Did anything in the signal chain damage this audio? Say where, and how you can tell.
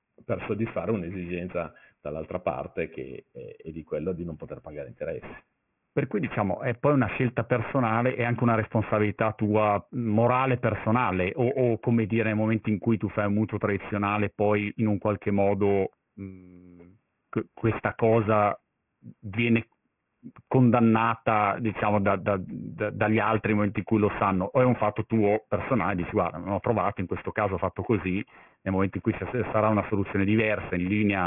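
Yes. Aliasing runs throughout, from a careless sample-rate conversion: gritty, metallic sibilants and energy jammed against 3 kHz suggest an unfiltered drop to 6 kHz, folding highs back about 15 dB down.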